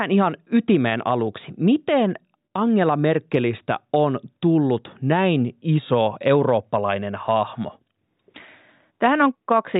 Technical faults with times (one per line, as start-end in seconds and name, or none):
none